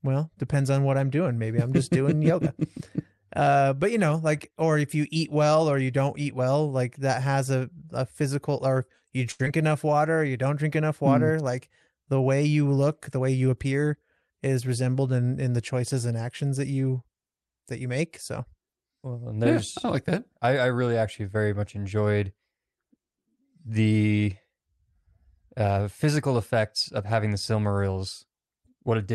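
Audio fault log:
9.31–9.41 s, short stall from a late packet: a packet arrived late, so the last sound was stretched about 78 ms, held too long without losing content.
9.45 s, short concealed packet loss: roughly 40 ms never arrived in time; the gap was filled by continuing the last sound, leaving a brief smear or wobble.
9.57–9.91 s, jitter buffer slow-down: repeated pitch periods added 39 ms to rebuild the buffer, so speech runs at 90% speed, drawn out at unchanged pitch.
13.20–14.32 s, jitter buffer speed-up: excess buffered audio was trimmed by removing short pitch periods, about 100 ms in all, so speech runs at 108%, hurried.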